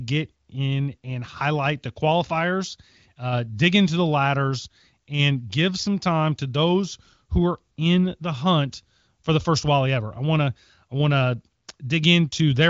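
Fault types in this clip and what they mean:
Nothing here counts as a fault: the speech comes through an HD Voice wideband phone link running at about 23 kbit/s, one of its highest rates, so it simply stops above about 7.5 kHz without any roughness to point at.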